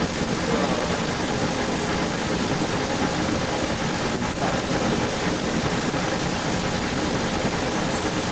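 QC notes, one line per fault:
Throughout, echo leak: a somewhat louder copy of the speech trails by 274 ms, likely uncancelled loudspeaker pickup; the spectrogram doubles each pattern, shifted right.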